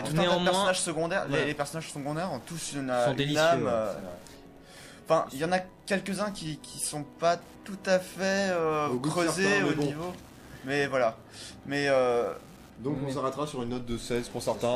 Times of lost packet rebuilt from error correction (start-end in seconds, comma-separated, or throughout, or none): none